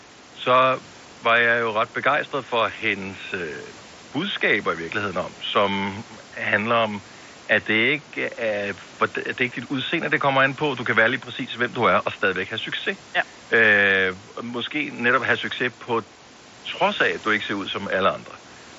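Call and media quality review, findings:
Nothing stood out on listening to this speech clip.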